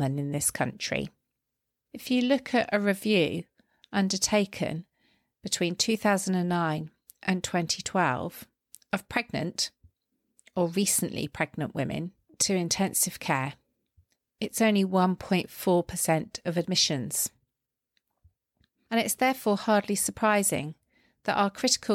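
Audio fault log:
Nothing stood out on listening to this speech recording.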